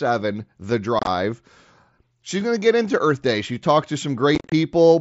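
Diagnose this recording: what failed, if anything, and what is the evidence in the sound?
The headset-to-phone Bluetooth link lost voice packets, with silence in their place: unconcealed Bluetooth headset packet loss on the mSBC stream. From 0.99 to 1.07 s, 52.5 ms drops out in holes up to 22.5 ms. From 4.35 to 4.52 s, 112.5 ms drops out in holes up to 37.5 ms. The speech sounds abruptly chopped.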